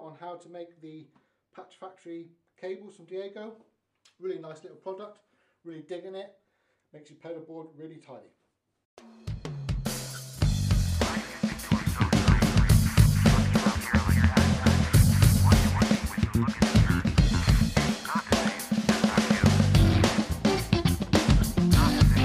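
From 11.63 to 15.95 s a doubled audio track appears: the whole sound is heard twice, with a second full-band copy trailing roughly 300 ms behind at about the same loudness as the first. It is most likely a second capture arriving through a slower path. Unlike an echo or reverb, the copy never fades or takes on any room colour, and it switches on and off abruptly at those two points instead of tailing away.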